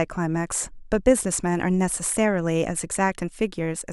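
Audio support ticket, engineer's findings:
No faults found in the signal path; the speech signal presents no audible technical defects requiring action.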